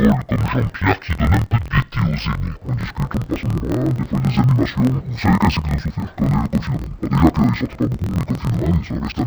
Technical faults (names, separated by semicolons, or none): interleaved audio read as planar